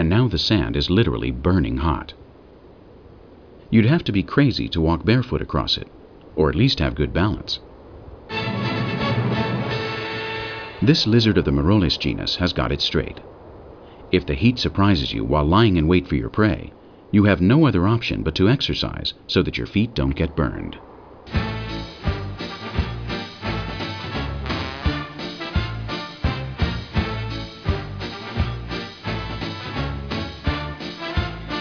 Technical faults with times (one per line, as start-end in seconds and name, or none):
none